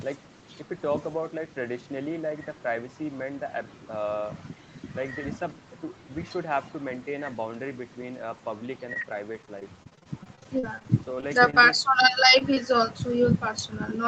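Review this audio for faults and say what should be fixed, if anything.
From 8.93 to 11.55 s there's a stretch of repeated packet loss with that robotic sound. Around twenty short holes, the longest about 39 ms, get patched by stretching the last bit of audio, so roughly a sixth of the span is filled-in sound. That's what makes it choppy.

Then there's short concealed packet loss at 12.39 to 12.42 s and again at 12.54 to 12.58 s. Each time about 20 ms went missing and the receiver bridged it by continuing the previous sound before blending back in, which comes across as a quick smear or wobble.

To fix it, tackle the network jitter and loss on that link, and give the jitter buffer a bit more depth or turn on Opus in-band FEC so single drops can be recovered rather than guessed.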